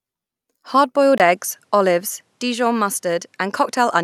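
At 1.18 s the input was likely switched to a poorer device: after a 20 ms gap, the speech loses everything above 13 kHz and carries new, faint background noise through the end, at much the same level.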